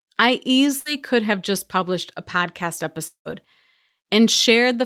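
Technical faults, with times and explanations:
0.79–0.88 s, burst of packet loss: the last sound is stretched and fades for about 60 ms while lost packets are concealed, then resumes with that stretch missing.
3.07–3.28 s, long network dropout: the sound is held and fades, then about 110 ms of silence, and about 180 ms is lost, likely from a network outage.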